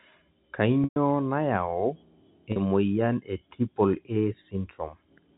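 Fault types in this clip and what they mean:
Packet loss with pitch repetition: bits of the stream went missing, and the receiver covered each hole by looping the last pitch cycle and fading it down. The 120 ms gap at 0.84 to 0.96 s runs long enough for that held buzz to die into silence before the speech cross-fades back. The 40 ms dropout at 2.52 to 2.56 s, just before "moyian e", is only a brief buzzy hold, which fits two lost 20 ms packets.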